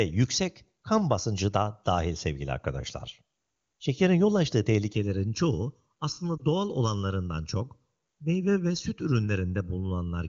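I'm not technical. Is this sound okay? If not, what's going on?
No. Channel delay (comb filtering) begins at about 4.96 s, just after "yol açtığı", and lasts to the end of the clip. One channel arrives roughly 0.7 ms behind the other, and when the two are combined, certain tones cancel at regular steps, starting around 700 Hz. The speech turns hollow, as if heard through a tube, and that coloring stays fixed for the rest of the recording.

A lost AMR speech frame causes a short blip at 6.38 to 6.43 s. A radio error ruined one 20 ms piece of the call, so the decoder filled the gap by briefly repeating what it had just heard at lower volume. You hear a tiny dip or wobble before the speech returns. The HD Voice phone coding carrying the call adds no noticeable damage of its own.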